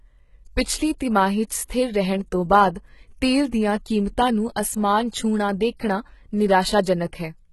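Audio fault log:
Throughout: HE-AAC compression. The treble of the speech sounds bright but synthetic, with s sounds turning gritty, metallic and lispy, and nothing at all above about 11.8 kHz. This is likely HE-AAC coding, which fits a very low bitrate in the region of 16 kbps: only the lower spectrum is coded properly, and the upper bands are copied up from below under a coarse envelope, so their harmonics no longer line up with the real ones, and the damage is heavy.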